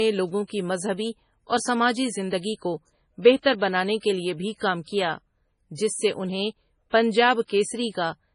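Throughout, the speech sounds watery and swirly, with nothing above 10.5 kHz. This is likely heavy MP3 compression, fitting a bitrate near 24 kbps.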